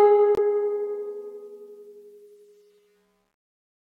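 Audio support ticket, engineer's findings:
Music cuts to silence 0.35–0.39 s, a 23 ms gap, then resumes further along. Likely Bluetooth dropout: late packet discarded, consistent with one lost frame.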